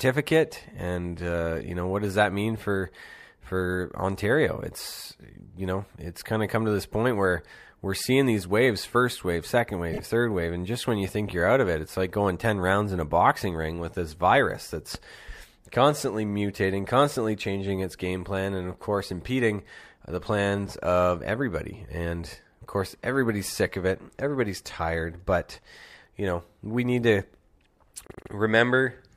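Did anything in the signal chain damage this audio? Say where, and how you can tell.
Yes: repeated frames at 9.92 to 10.00 s and 28.07 to 28.31 s, from the codec or storage stage. A 26.1 ms block, which fits one compressed frame, plays twice more. Later a 78.4 ms block plays three extra times. The decoder replays the duplicated data as a stutter, stretching the audio by 287 ms.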